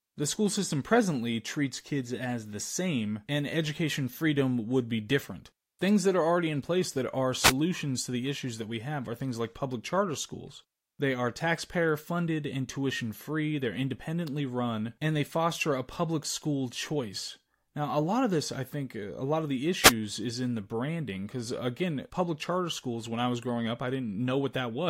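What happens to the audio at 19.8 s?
At 19.81 s, right after "a lot of the", the speech is hit by a wireless microphone noise hit lasting about 0.12 s, until 19.93 s, just before "is in the branding". The analogue FM radio link fades briefly as reflected signals cancel at the receiver. Its noise floor rises, heard as a short swish of static, then the speech resumes.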